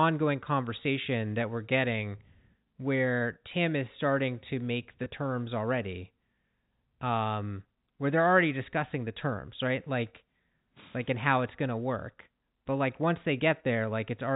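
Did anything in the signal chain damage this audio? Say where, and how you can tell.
Yes. At 5.04 to 5.06 s the speech briefly sticks on a slightly held, buzzy tone, as if one instant were stretched, then carries on. This is packet loss with pitch repetition at the network stage. About 20 ms of audio never arrived, which fits a single lost packet. The receiver filled the hole by repeating the last pitch period, producing that sustained buzz. Around it, the band-limited G.711 telephone coding is audible as expected.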